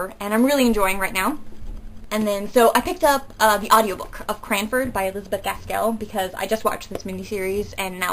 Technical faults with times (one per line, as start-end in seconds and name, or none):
none